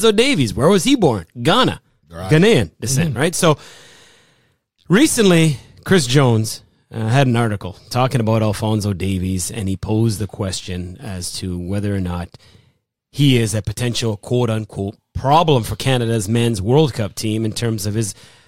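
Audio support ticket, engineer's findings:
Engineer's findings: no audible fault found in the speech audio on this support ticket.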